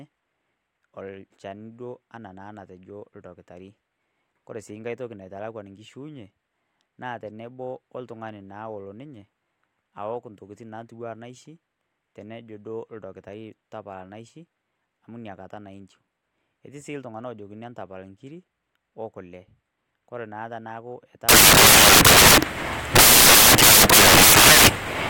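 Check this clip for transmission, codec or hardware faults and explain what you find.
One fault is present: samples built from the wrong bytes, from 21.29 s to the end at 25.09 s. The reader assembles each sample with misplaced byte order or alignment, so the fast-changing low bits dominate, and the speech turns into loud, harsh broadband noise, close to white on the louder speech.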